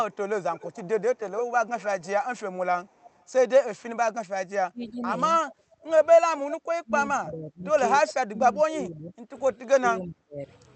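Speech, with a faint delayed copy of itself trailing behind in several places, consistent with an echo leak where the far end plays the call on a loudspeaker and its echo canceller lets part of the pickup return. The strongest stretch runs from 0.11 to 2.07 s, with the copy arriving about 284 ms late and roughly 15 dB below the direct speech. A weaker return, around 30 dB down at the same 284 ms delay, appears from 2.86 to 3.24 s. Two brief scraps follow with a longer lag of about 335 ms, at 4.82 to 4.91 s and 5.51 to 5.55 s, both near 30 dB down. From 4.67 to 5.03 s the speech itself dips sharply, by as much as 35 dB over roughly a third of a second, and again across a long span from 6.17 to 10.46 s, where about three seconds in total are pulled down in pieces. This points to speech suppressed in double talk, the canceller likely treating the near talker as echo while both sides overlap and attenuating everything. 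Between 5.55 and 5.84 s the room sound drops by up to 13 dB for about 300 ms and then returns, which is the background gated by the echo canceller clamping the microphone just after the 5.51 s echo scrap. Throughout, the Opus call path keeps the audio band-limited to 8 kHz.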